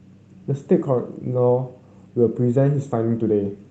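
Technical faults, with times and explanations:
No technical faults are present in this speech, which carries the sound of a WebRTC call path whose Opus coding, fitting a bitrate of around 32 kbps, limits the audio band to 8 kHz.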